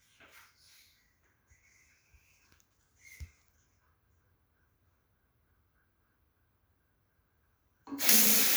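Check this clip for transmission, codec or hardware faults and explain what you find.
Nothing here points to a transmission, codec or hardware problem; the sound comes through steady and intact, with nothing to flag.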